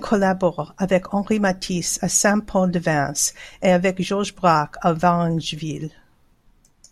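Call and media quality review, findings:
Repeated buffer at 5.03 s in the speech. Symptom: single sharp click, no audible stutter. Component: playback device or output driver. Mechanism: new audio late, last buffer played once more. Repeat span about 1.3 ms, which fits a 64-sample buffer. Hard join at each edge. Piece too short to hear as a repeat, so it reads as a click. Roughly a millisecond and a half of audio lost.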